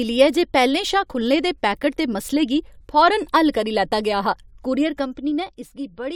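A speech clip with zipper noise from 4.66 to 5.54 s, just after "करी लैता गेआ हा": the level drops about 10 dB in 2 dB steps, roughly seven per second, without smoothing. The waveform shows a staircase envelope, and each step leaves a faint vertical click line on the spectrogram.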